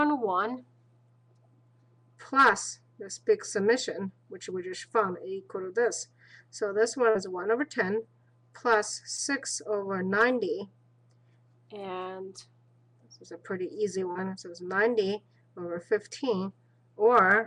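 Short concealed packet loss occurs at 7.10 to 7.16 s, 9.17 to 9.19 s and 14.12 to 14.16 s. About 50, 10 and 30 ms of audio arrived too late. The receiver extended the preceding sound and blended back. Each gap is a brief smear or wobble.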